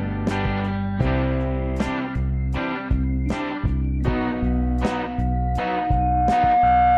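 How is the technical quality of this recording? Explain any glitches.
The recording is marred by loudspeaker feedback squeal in the final part of the music. From 4.24 s to the end, a steady tone near 717 Hz swells over roughly two seconds until it sits a few decibels above the music itself, and it is still ringing when the audio stops. The cause is a microphone hearing the loudspeaker it feeds: at 717 Hz the loop gain passed one, so that frequency kept reinforcing itself into a sustained howl.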